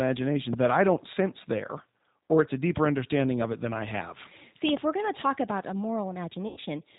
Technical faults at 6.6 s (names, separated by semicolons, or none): G.729 codec; VoIP packet loss concealed by the speech codec